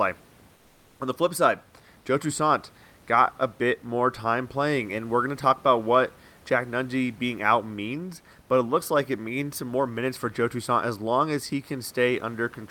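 Comfort noise in place of the background runs from 0.55 to 0.99 s. For those 440 ms the room's own noise becomes a flat, featureless hiss about 2 dB quieter, likely from Opus discontinuous transmission, where the receiver synthesises noise while the sender stays silent.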